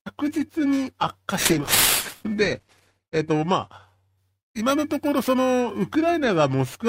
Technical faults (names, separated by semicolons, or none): periodic clock jitter; call bitrate drop